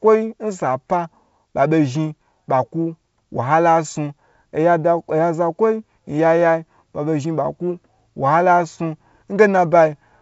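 No technical faults are audible.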